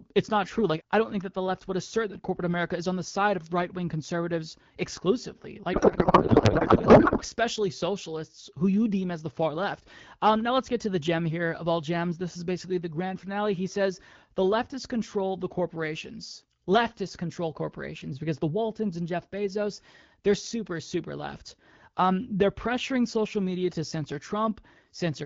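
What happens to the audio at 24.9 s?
At 24.9 s the speech comes through intact, with nothing wrong to hear at that moment.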